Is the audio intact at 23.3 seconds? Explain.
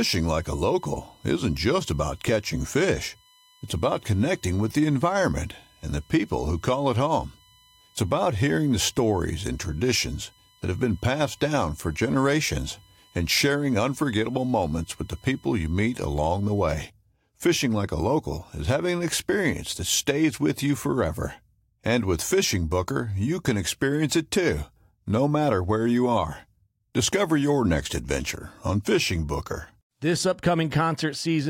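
Yes, the speech at 23.3 seconds plays through intact, with no audible fault at that moment.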